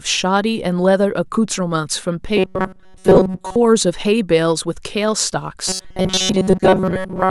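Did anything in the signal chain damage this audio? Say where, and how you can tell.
Yes. A likely starved driver buffer kept looping a chunk of about 5.3 ms, causing robotic sound from repeated short buffers: a rigid 188 Hz buzz at 2.37 to 3.56 s and 5.68 to 7.31 s.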